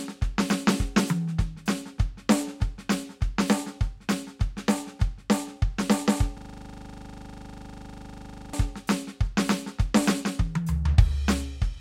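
At 6.38 s the music freezes into a system hang loop until 8.53 s: the same 40 ms slice repeats about 54 times, giving a rough 25 Hz stutter-buzz. The waveform shows one identical segment tiled end to end; the spectrogram shows evenly spaced vertical stripes every 40 ms.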